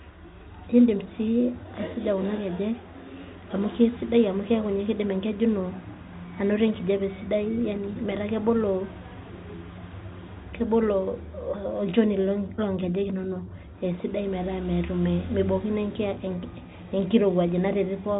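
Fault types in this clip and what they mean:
No faults are present in this speech recording.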